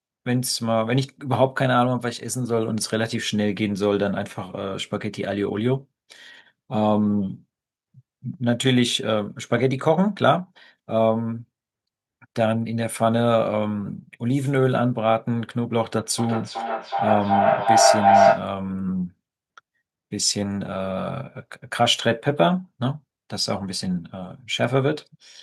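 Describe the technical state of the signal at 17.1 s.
At 17.1 s the signal is in feedback howl, running from 16.18 to 18.56 s. A microphone-to-loudspeaker loop gains level each pass, so repeats grow and narrow to a tone around 700 Hz, pulsing about every 0.4 s and peaking about 6 dB above the speech.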